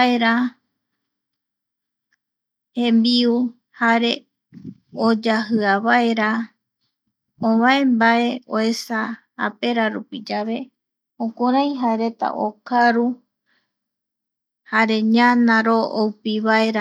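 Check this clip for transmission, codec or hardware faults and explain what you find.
I found no faults in this clip, so there is nothing to explain.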